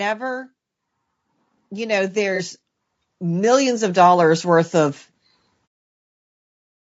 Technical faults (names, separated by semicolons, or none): low-delay AAC compression; automatic gain rising; AAC frame loss with concealment